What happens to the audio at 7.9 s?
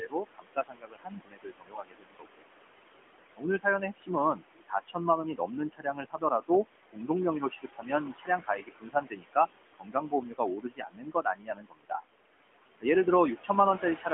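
Parts of the speech sound swallowed and faint at 7.9 s. That moment falls inside the stretch from 3.36 to 12.04 s where the noise suppressor cuts speech. It mistakes soft consonants and quieter syllables for background noise and turns them down by up to about 22 dB, for around four seconds in total across the span. Under and between the speech, noise suppressor artifacts are present throughout. The room noise, about 11 dB below the speech, is pulled down by about 20 dB frame by frame, so what remains sinks and rises with the speech.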